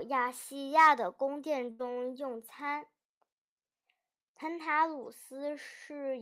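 At 1.71 s a burst of packet loss drops about 80 ms of speech; the receiver stretches and fades the last sound until 1.81 s, then jumps ahead.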